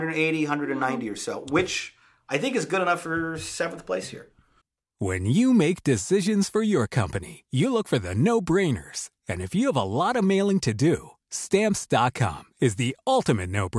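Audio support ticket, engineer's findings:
Listened through the speech recording and found nothing to flag; no faults to report on this ticket.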